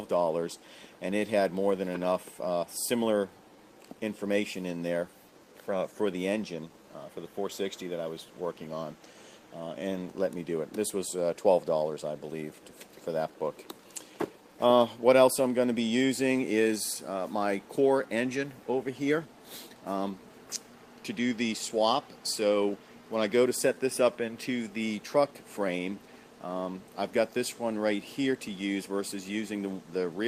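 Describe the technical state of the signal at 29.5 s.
At 29.5 s the sound carries a faint, uneven tempo wobble: small hiccups where a sliver of audio seems to repeat, so the flow runs fractionally slow. These are repeated timing corrections, which run from 0.02 s to 30.02 s. The receiver keeps inserting short repeated pieces to stay in step. The result is playback at about 99% speed and a few tenths of a second added over the whole span. The edits all go the same way but are spaced irregularly.

The cause is clock drift between sender and receiver. The sender's audio clock runs slow, by roughly one and a half percent, so its packets arrive slightly too slowly for the receiver's playout rate and the jitter buffer keeps draining. Each time the buffer runs low, the receiver stretches the audio by duplicating a brief segment. Because that happens repeatedly through the clip, any hiccup heard around 29.5 s is one of many similar ones.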